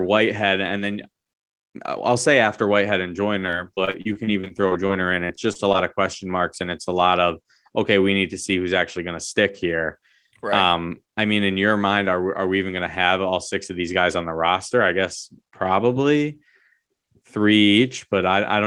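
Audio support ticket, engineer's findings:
Repeated packet loss (robotic sound), 3.39–4.91 s: choppy speech. About 15 short holes, longest 35 ms, concealed by extending the previous sound, roughly a fifth of the stretch. About 220 ms of content gone. Network loss in the Opus call path, not a single stall.

Same fault, 5.27–5.76 s, ending just before "of question marks and": about 5 holes, longest 23 ms, about 80 ms lost. Its repeated, clustered gaps with real content missing set it apart from a one-off late packet.

Short stall from a late packet, 6.84–6.88 s, between "question marks and it's" and "a lot of okay": one sound held about 22 ms, slight buzz or dip, then playback resumes where it left off. Jitter buffer ran dry. Nothing missing; delay grows by 22 ms.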